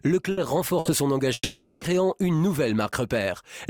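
At 0.31 to 0.40 s and again at 0.79 to 0.88 s, the sound briefly smears into a held, fading tone before jumping ahead. These are bursts of packet loss: about 60 ms of audio never arrived, and the receiver stretched the last fragment to cover the gap.

From 1.33 to 1.84 s a longer fading buzz or hiss runs for about 480 ms, ending in a brief silence before the audio returns further on. This is likely a long network dropout, with roughly half a second of audio lost and concealed.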